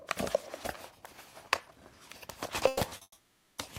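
At 2.67 s, packets were likely held up in transit and the jitter buffer drained, producing a call audio freeze. The receiver kept sustaining the last sound for about 140 ms, to 2.82 s, as a fading buzz or hiss. When the stream resumed, it picked up exactly where it had stopped. Nothing is lost, but a 140 ms pause is inserted.

Two short stalls from a late packet follow. In each, a packet missed its playout time and the receiver stretched the preceding sound until it arrived. The first runs from 2.89 to 2.92 s and holds for about 20 ms. The second runs from 2.97 to 3.02 s and holds for about 40 ms. Each is heard as a sound lingering slightly too long, with a faint buzz or dip, before carrying on intact.

Right after that, at 3.02 s, a longer call audio freeze starts, again likely from delayed packets emptying the buffer. It lasts until 3.59 s, adding about 560 ms of delay. The held sound continues as a buzz or hiss that fades, and about 40 ms of it decays into outright silence before playback resumes from the same point.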